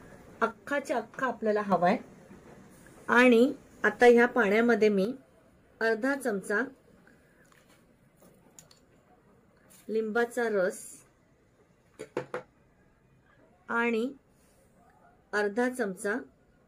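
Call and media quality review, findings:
One channel drops out, 0.51–1.72 s and again 5.05 s to end of clip. Abrupt level fall of about 6 dB in the mono sum, otherwise unchanged. Likely cause: lost stereo channel upstream of downmix, halving shared signal.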